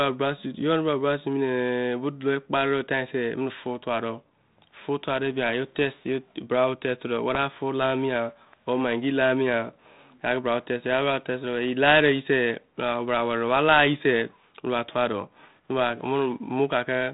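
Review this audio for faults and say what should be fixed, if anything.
Bit errors on the ADPCM link corrupted a short stretch of the G.726 stream, which sounds like a 32 kbit/s link. Each flipped bit throws off the decoder's step size and predictor, so at 7.35 to 7.38 s the speech breaks into a brief rough pop with a momentary level change. Adding error protection or a cleaner radio path would prevent it.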